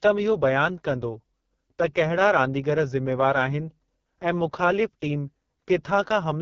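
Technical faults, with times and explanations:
Throughout, AMR wideband (HD Voice) codec: rough, raspy speech with nothing above 7.2 kHz, which fits its lowest bitrate, where the pulse-driven vocal model is starved of detail.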